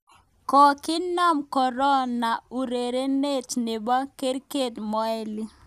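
No technical faults are audible in this speech.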